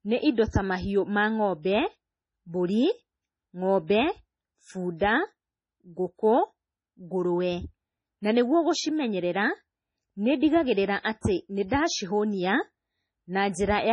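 MP3 compression runs throughout. Nothing is heard above 10.5 kHz, and weak frequency lines drop in and out, making the speech watery and swirly. This points to heavy encoding, likely at a bitrate around 24 kbps. Pre-echo at 0.50–0.54 s: a short hiss of about 33 ms precedes "ta mahiũ ma", as quantisation noise spread across the transform block leaks ahead of the attack and softens it.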